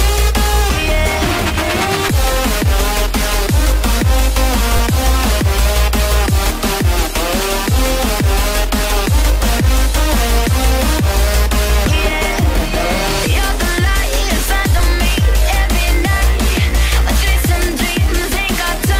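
At 4.77 to 4.79 s and 14.79 s, a repeated buffer replays a 10 ms slice when new audio arrives late. It sounds like a brief buzz rather than a silent gap.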